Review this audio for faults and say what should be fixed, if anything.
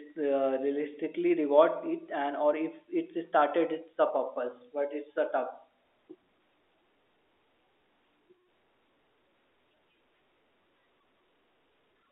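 Nothing needs fixing. The speech carries the expected G.711 telephone coding, its band held to about 300 Hz to 3.6 kHz, and no faults turn up.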